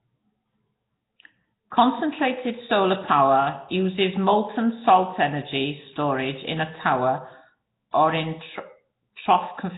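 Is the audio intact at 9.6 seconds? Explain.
No. At 9.6 seconds, as throughout the clip, the speech has likely passed through Nellymoser compression, the old Flash microphone codec. It codes short blocks at a fixed, very low bit budget, consistent with a 16 kbps stream, so weak bands get no bits and are filled with noise, and nothing survives above about 3.8 kHz. The damage is heavy: the speech sounds dull and smeared, with a rough, hissy halo and an underwater quality.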